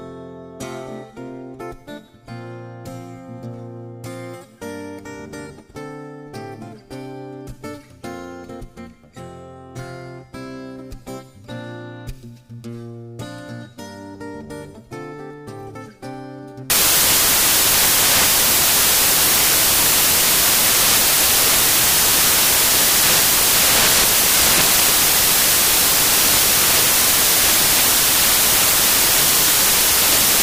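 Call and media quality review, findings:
Loud harsh broadband noise from 16.7 s to end of clip. Samples built from the wrong bytes: decoder misaligned or byte-swapped, promoting fast-changing low bits into the high-order part of each sample.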